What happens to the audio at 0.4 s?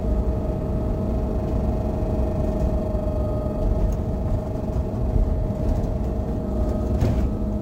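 At 0.4 s, as throughout, there is imaging from sample-and-hold upsampling. Raising the rate from 22 kHz to 48 kHz by repeating samples left mirror copies, the first spanning about 11 kHz to 22 kHz at about -35 dB, heard as a metallic fizz tracking the sound.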